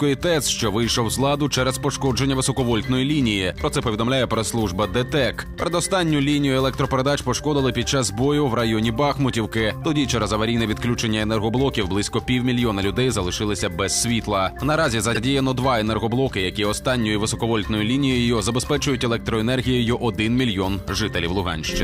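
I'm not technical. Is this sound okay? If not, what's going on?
No. At about 15.14 s there are repeated frames: a tiny chunk of the compressed audio, about 52 ms long, was stored twice, so the player plays it again. You hear a brief stutter or hiccup, and the sound runs about 52 ms longer.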